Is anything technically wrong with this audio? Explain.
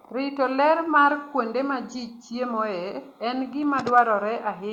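No, nothing technically wrong stood out on listening to this speech recording.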